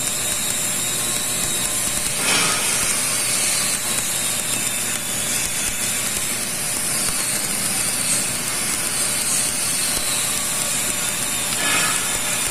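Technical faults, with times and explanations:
Throughout: stuck bit. A harsh, buzzy distortion sits over the whole clip, and the quiet stretches fill with gritty noise instead of falling silent. This is most likely one data bit held fixed by a broken line or converter. About half the samples are pushed off by that bit's weight, a step of about -30 dBFS, so the error follows the waveform and flips as small values change sign, keeping the pauses noisy.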